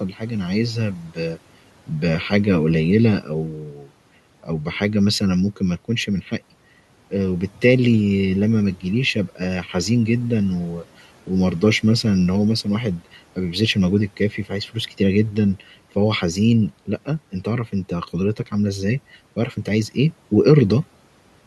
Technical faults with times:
0.98-1.18 speech cut by the noise suppressor
3.21-3.89 speech cut by the noise suppressor
14.17-14.52 speech cut by the noise suppressor

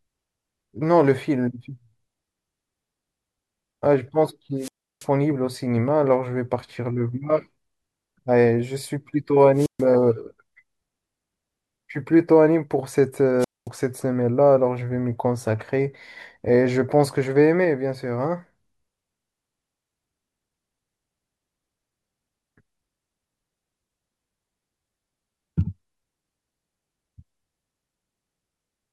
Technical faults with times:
4.58-5.07 wireless microphone squelch dropout
9.55-9.85 wireless microphone squelch dropout
13.39-13.68 wireless microphone squelch dropout

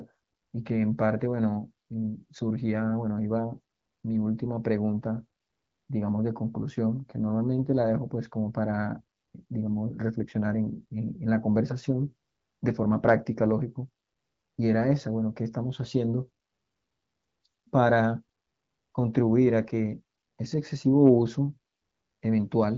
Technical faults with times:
none

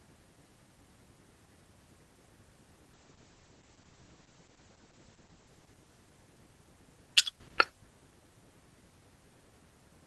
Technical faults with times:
2.94-6.81 call bitrate drop

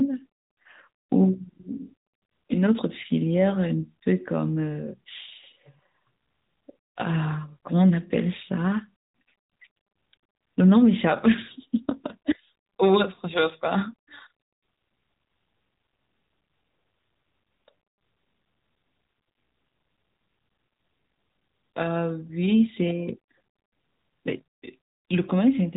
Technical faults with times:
0.00-25.76 AMR narrowband mobile codec

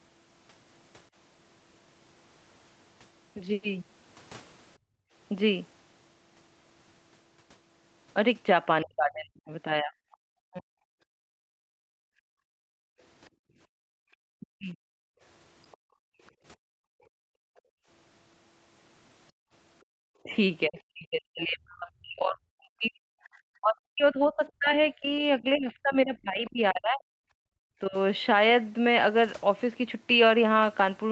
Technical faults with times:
4.78-5.13 background gated by the echo canceller
8.82-10.81 speech suppressed in double talk
9.38-10.17 other side's voice leaking through
11.09-19.95 background gated by the echo canceller
14.41-14.75 speech suppressed in double talk
15.72-17.60 other side's voice leaking through
20.23-27.96 speech suppressed in double talk
27.44-27.57 background gated by the echo canceller

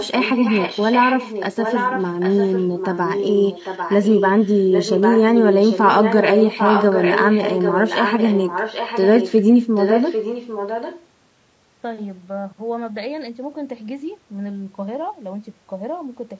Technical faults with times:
0.00-16.39 low-delay AAC compression
0.00-9.43 echo leak
9.75-11.05 echo leak

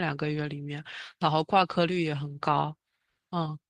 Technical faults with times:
none

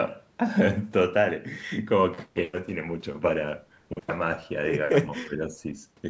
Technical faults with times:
5.25-5.41 speech suppressed in double talk

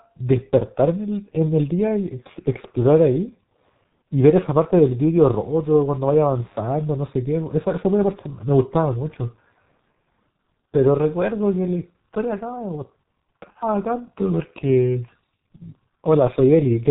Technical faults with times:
0.00-16.91 G.723.1 codec
5.14-6.64 mains buzz

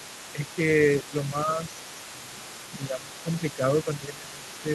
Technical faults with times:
0.00-4.74 other side's voice leaking through
0.33-0.40 speech suppressed in double talk
1.02-1.61 speech suppressed in double talk
2.12-4.67 speech suppressed in double talk

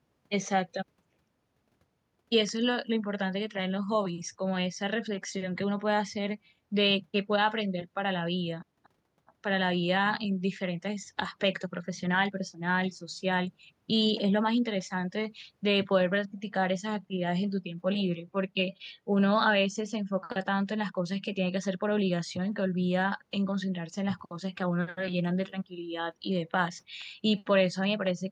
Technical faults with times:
none

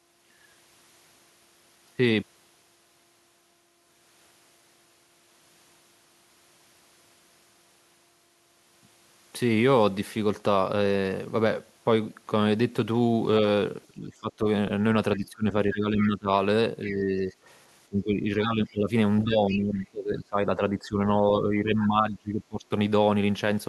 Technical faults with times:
13.88-14.46 speech suppressed in double talk
15.17-16.28 speech suppressed in double talk
16.84-17.32 speech suppressed in double talk
16.85-16.94 other side's voice leaking through
17.87-18.92 speech suppressed in double talk
19.24-22.71 speech suppressed in double talk
19.50-19.59 other side's voice leaking through

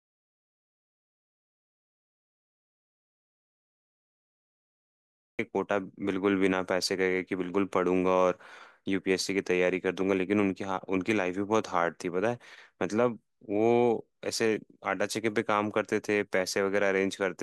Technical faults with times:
0.00-5.39 audio dropout to silence

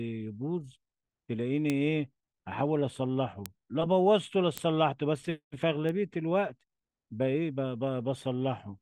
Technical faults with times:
1.70 bit error spike
3.46 bit error spike
4.58 bit error spike
5.89 bit error spike

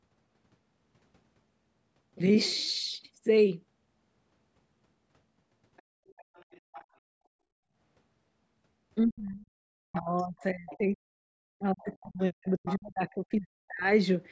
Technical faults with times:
5.77-5.82 other side's voice leaking through
6.07-6.85 other side's voice leaking through
9.00-9.51 speech suppressed in double talk
9.85-13.89 speech suppressed in double talk
10.40-10.77 other side's voice leaking through
11.90-12.07 other side's voice leaking through
12.66-12.78 other side's voice leaking through

